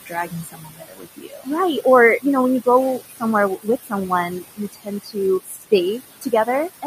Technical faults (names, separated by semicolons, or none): overdone noise removal; noise suppressor artifacts; speech cut by the noise suppressor